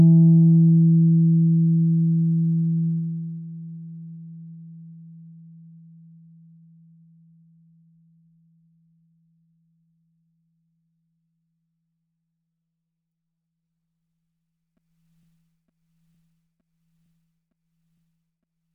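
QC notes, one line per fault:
No faults found.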